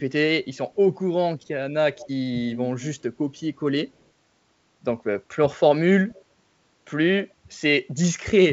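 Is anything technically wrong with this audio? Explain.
Yes, there is an echo leak. An echo canceller at a loudspeaker end of the call was likely failing to subtract everything its microphone picked up, so fragments of the speech returned to the line about 148 ms late. These appear as short, faint delayed copies at 1.95–2.08 s, 2.8–3.02 s, 3.36–3.4 s, 3.89–4.06 s and 6.1–6.24 s. The echo is roughly 20 dB below the speech at first, drops to about 40 dB down around 3.4–4.1 s, then reappears at about 25 dB down.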